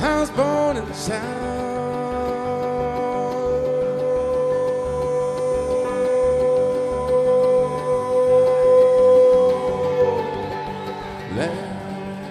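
At 1.33 s a few compressed frames arrived with corrupted bits, and the decoder detected the damage and concealed it rather than playing garbage, which is a corrupt frame concealed. It either silenced those frames or filled them with a scrambled copy of the last good spectrum, over a span running to 1.41 s. That span of about 76 ms fits roughly three AAC frames.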